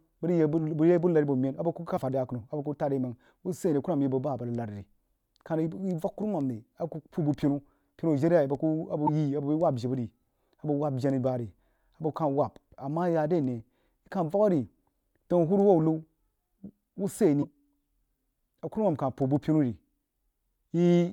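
A speech clip with three very short glitches, at 1.96 to 1.98 s, 9.06 to 9.09 s and 17.41 to 17.44 s. Each lasts under 30 ms, about one MP3 frame of 24 ms. The sound skips forward, with a brief disturbance at the join. The likely cause is a broken MP3 bit reservoir. Frames were lost, so the next frame reached back for borrowed data and decoded bytes from the wrong frame.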